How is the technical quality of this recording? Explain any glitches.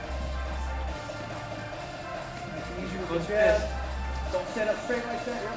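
Listening through the recording, nothing stood out as a technical problem, so there are no glitches to explain.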